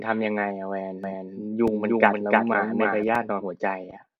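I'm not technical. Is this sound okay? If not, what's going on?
No. From 1.04 to 3.04 s there is a doubled audio track. The speech plays twice, with a second copy about as loud as the first and roughly three tenths of a second behind. The copy starts and stops abruptly. The likely cause is the sound being picked up again through a slower path.

There are also two repeated buffer faults, at 1.68 s and 3.15 s. Each time, new sound arrived late. The player repeated its last tiny slice, under three thousandths of a second long. That makes a quick click.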